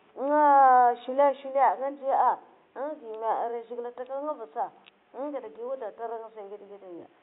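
Nothing here points to a technical fault, just a faint bed of room noise sitting about 43 dB below the speech, which belongs to the space the microphone was in rather than to anything going wrong along the way.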